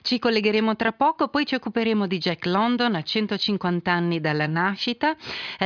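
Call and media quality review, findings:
No audible faults found in this clip. Nothing to escalate against the capture, transport or playback chain.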